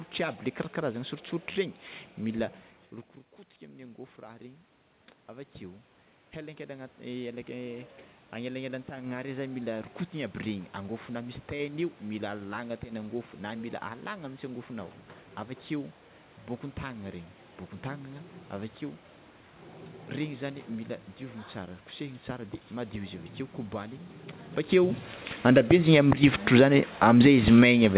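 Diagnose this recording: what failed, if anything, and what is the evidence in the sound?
Automatic gain rising in call processing. From 5.27 to 11.07 s, voice and background swell together about 10 dB, chasing an input about 17 dB quieter.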